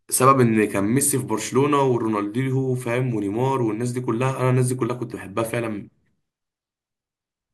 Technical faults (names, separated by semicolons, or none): none